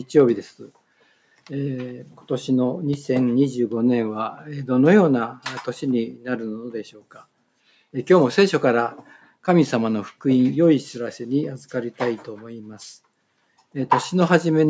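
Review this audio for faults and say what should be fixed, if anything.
Sound cut by the noise suppressor at 1.01 to 1.49 s and 6.90 to 7.26 s: the suppressor misread parts of the sound as noise, pulling them down by about 11 dB and about 12 dB for roughly a fifth of a second each. Fix by lowering the suppression strength or lengthening its release so sustained material isn't classified as noise.

Loud pop at 2.93 to 2.96 s: a single sharp transient peaking about 5 dB above the signal, likely a voltage step from a connector, switch or driver glitch, with the sound continuing underneath. Fix by securing cables and connectors, grounding properly and keeping driver software stable during capture.

The call microphone processing's band limit at 8 kHz is expected and needs no correction.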